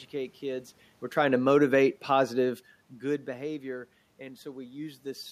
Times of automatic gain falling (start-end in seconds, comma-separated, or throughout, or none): 1.10-2.71